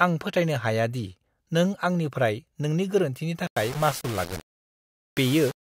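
From 3.47 s to the end, speech turns gritty: low bit depth without dither, likely rounding to 5 bits, giving a stair-stepped waveform and signal-tracking spectrogram noise.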